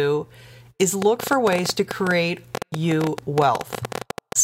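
From 1.02 s to 4.33 s, a train of clicks runs over the speech. About eleven per second arrive at an uneven pace, some forty in all. They peak about 15 dB above the signal. They tick through pauses too. Likely cause: interference or a faulty connection or power supply.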